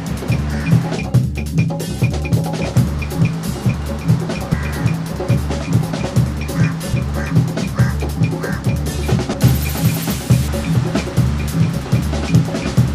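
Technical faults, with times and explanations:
2.14 s, 6.94 s, 11.74 s: audio missing between chunks. Regularly spaced abrupt skips, each dropping about a tenth of a second with the two sides butted together, likely from chunked processing losing audio at each handover.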